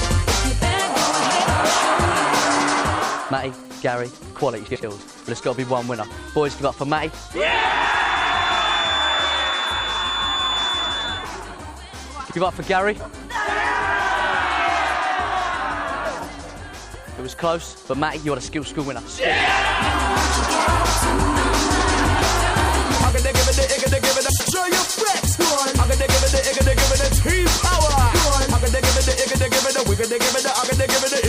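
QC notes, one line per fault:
Throughout: MP3 compression. A watery, swirling quality with dulled treble, metallic chirps on sibilant and bright sounds, and softened attacks is likely caused by an MP3 encoder starved of bits, which fits a low bitrate around 64 kbps. Unlike frame swaps, it never lets up.
4.67–4.84 s, 7.91–8.02 s, 12.25–12.36 s and 24.29–24.51 s: frames out of order. Each stretch plays its two halves swapped, with blocks of about 78, 52, 52 and 104 ms, giving a garbled flutter. Unlike a dropout, no time goes missing.
7.33–11.31 s: feedback whistle. A thin, steady tone at 3.5 kHz sits a few dB below the sound and swells and fades slowly in level. A loudspeaker-to-microphone loop held just short of runaway is the likely cause. Unlike howling feedback, it never grows.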